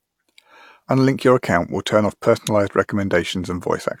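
No technical faults can be heard at any point in the clip.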